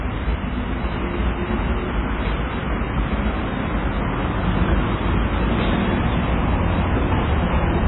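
From start to finish the audio carries heavy damage of the kind left by MP3 compression, most likely at a very low bitrate in the region of 15 kbps. Nothing remains above 3.9 kHz, so the sound is dull and boxed-in, and starved weak components flicker in and out, giving a watery, swirling texture with smeared attacks. On a spectrogram the energy stops at a flat ceiling near 3.9 kHz, and the detail beneath it looks patchy and blocky.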